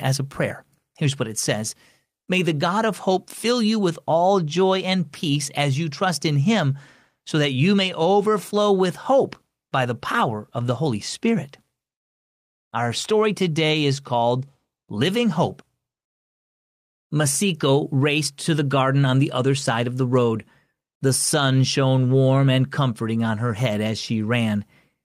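Speech recording, no technical faults detected.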